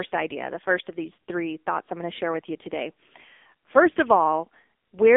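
Throughout, an AMR narrowband mobile codec, at a rate fitting 6.7 kbps, removes everything above 3.7 kHz, leaving thin, heavily buzzy, synthetic-sounding speech.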